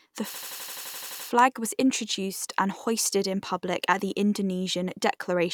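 From 0.34 to 1.28 s, a system hang loop stutters. A frozen driver replays one 85 ms slice at 11.7 Hz, which fits a 4096-sample buffer.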